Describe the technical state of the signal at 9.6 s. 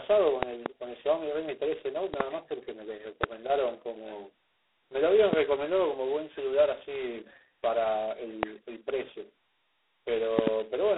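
At 9.6 s the speech carries a harsh, rasping hiss that rises and falls with its level, confined to a narrow 250 Hz to 3.6 kHz band with nothing above 3.9 kHz. This is G.726 ADPCM coding, present throughout, whose coarse prediction-difference samples point to the 16 kbit/s mode.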